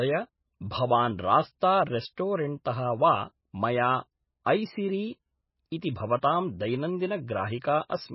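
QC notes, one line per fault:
Throughout, MP3 compression: the codec is likely starved of bits, at a rate near 16 kbps, so it discards everything above 5.6 kHz and drops weak frequency lines frame by frame. The speech sounds dull, watery and swirly, with heavy codec damage smearing consonants and attacks.
2.15 s and 6.21 s, pre-echo: quantisation noise meant for a sharp onset spreads back across the quiet start of its transform block, so a short hiss of about 20 to 23 ms arrives before each attack, which then lands soft and smeared.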